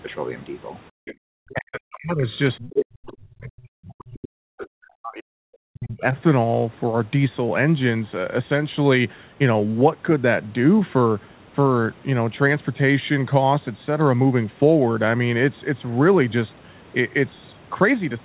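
From 0.9 to 1.24 s the echo canceller clamped the microphone while its loudspeaker played, so the background was gated by the echo canceller: the room sound falls away by about 40 dB for roughly a third of a second, then returns.

Inside that gap, from 1.05 to 1.14 s, a faint second voice sits around 20 dB below the speech. This is likely the other side's voice leaking through, residual loudspeaker echo the canceller failed to subtract.

From 1.52 to 2.29 s, and again from 2.59 to 6.16 s, the canceller likely could not separate its own talker from the incoming echo during double talk and turned everything down. The result is speech suppressed in double talk: the voice sinks by as much as roughly 40 dB and comes through patchy and broken.

During that longer stretch, the same leaked voice surfaces in short scraps at 2.59–2.67 s, 3.11–3.17 s and 4.59–4.67 s, at about 20, 25 and 15 dB below the talker respectively.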